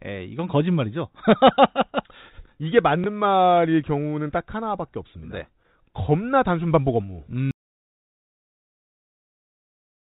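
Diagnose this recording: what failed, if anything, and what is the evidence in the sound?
At the network stage, one packet went missing and the receiver covered the gap by replaying the previous one. That is packet loss with last packet repeated. From 3.04 to 3.06 s, a single 20 ms packet repeats, producing a small blip.

The second fault is an audio dropout to silence. The input path most likely lost its signal, through a disconnected device or failed link, while the encoder went on writing silence. From 7.51 s the speech cuts out abruptly and stays silent to the end, with no room tone, and the G.711 telephone band carries nothing further.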